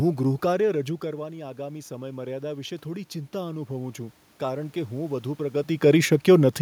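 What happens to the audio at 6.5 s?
Nothing goes wrong at 6.5 s; the speech is intact there, with only the room's own background noise beneath it.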